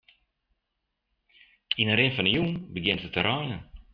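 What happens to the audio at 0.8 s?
Nothing goes wrong at 0.8 s; the speech there plays through intact, with no dropout, click or distortion at that moment.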